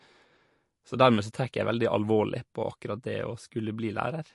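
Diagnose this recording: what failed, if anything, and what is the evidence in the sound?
Codec stage, likely MP3 compression: throughout, nothing above 11.3 kHz and an audible watery swirl, fitting about 48 kbps. The swirl separates it from simple low-pass filtering.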